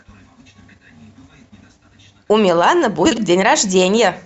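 From 3.05 to 3.18 s, frames out of order: two adjacent 60 ms blocks play swapped, a garbled flutter, showing as vertical spectrogram seams.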